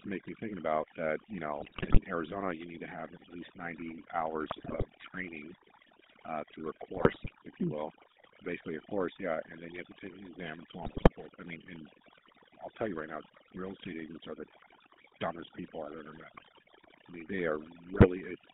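From start to finish the speech carries two faults. Overdone noise removal has pushed the background to near silence, leaving isolated twinkling specks where narrow bands slipped above the suppressor's noise estimate, while the quieter parts of the voice were cut along with the noise. On a spectrogram the gaps between phrases look almost empty, sprinkled with scattered bright dots, and the weaker harmonics break into patchy fragments.

The GSM full-rate codec damage is plainly audible. The sound is confined to roughly 200 Hz to 3.7 kHz, and its rough, buzzy, gravelly texture fits the 13 kbps full-rate coder. That codec rebuilds the vocal tract from a filter model and drives it with a sparse train of regularly spaced pulses, which produces the grainy edge. A spectrogram shows a hard ceiling just under 3.7 kHz, with smeared, comb-like harmonics below it.

GSM bit errors strike six times, at 1.57–1.99 s, 4.48–4.85 s, 6.96–7.31 s (after "uh through a", before "if you mm will"), 10.82–11.09 s, 16.30–16.44 s (after "dumbest people I've ever") and 17.93–18.07 s (after "I mean they"). 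Corrupted filter, pitch and gain values reached the decoder, bending the spectrum and throwing the level around frame by frame, which turns the sound into squawks, pops and gargling. The waveform shows sudden amplitude spikes, and the spectrogram shows blocky, misplaced bursts of energy.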